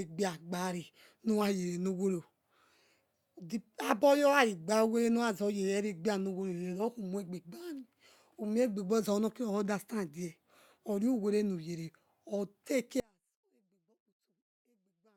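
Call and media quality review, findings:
Audio dropout to a faint residue from 13.0 s to end; speech collapses to faint residue roughly 35 dB down, likely upstream path interruption. Waveform: abrupt near-flat tail; spectrogram: sudden dark band.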